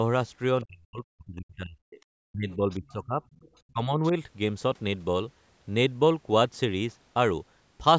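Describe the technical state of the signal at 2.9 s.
At 2.9 s the speech sits in a stretch of speech suppressed in double talk, from 2.26 to 3.22 s. It dips by up to around 25 dB, likely because the echo canceller ducked everything while both ends talked. There's also the other side's voice leaking through from 2.71 to 2.93 s, a faint scrap around 30 dB under the speech, likely echo residue the canceller didn't fully remove.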